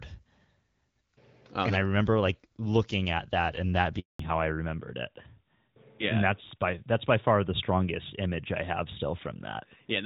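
At 3.99 s a handover gap opens as the call switches networks: no speech frames arrive for 200 ms, so the sound fades out within tens of milliseconds and stays silent until 4.19 s, a flat, near-empty stretch in the waveform and a blank vertical band on the spectrogram.

From 4.19 s to the end, a fallback to narrowband takes over. The lightly coded wideband sound before the gap, consistent with HD Voice around 12.65 kbit/s, gives way to a duller, rougher tone that fits a narrowband codec near 12.2 kbit/s. The spectrogram shows a hard ceiling at 4 kHz.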